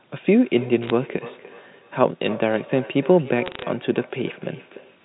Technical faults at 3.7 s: feedback echo between two devices; bit errors on a digital phone line

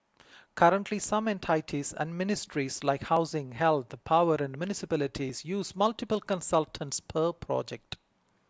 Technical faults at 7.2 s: clock drift buffer slips

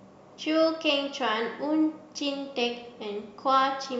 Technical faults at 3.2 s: none

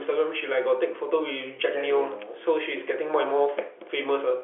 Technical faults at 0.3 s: none

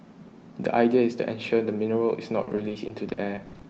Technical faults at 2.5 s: repeated packet loss (robotic sound)

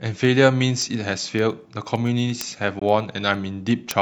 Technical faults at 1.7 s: word clock ticks

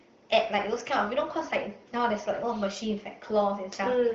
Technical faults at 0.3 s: none

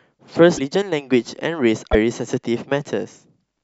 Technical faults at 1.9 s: broken MP3 bit reservoir

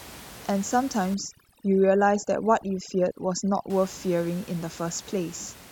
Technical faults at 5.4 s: none

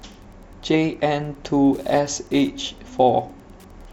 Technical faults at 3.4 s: Wi-Fi interference

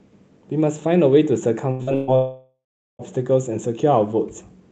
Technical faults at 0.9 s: none

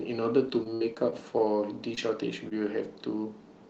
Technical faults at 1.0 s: repeated packet loss (robotic sound)

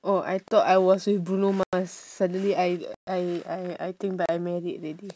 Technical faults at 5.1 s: none

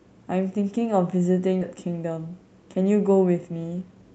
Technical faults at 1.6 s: skip ahead

